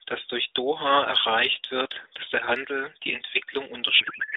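Speech carried over an AMR narrowband mobile codec, band-limited to about 300 Hz to 3.7 kHz with light coding damage. From 3.99 s to the end at 4.37 s, a codec payload misread turns the speech into garbled, warbling noise, which points to octet-aligned AMR frames being unpacked as bandwidth-efficient. On a spectrogram the formant bands dissolve into smeared noise within the same band, and in the waveform the envelope stops following the syllables.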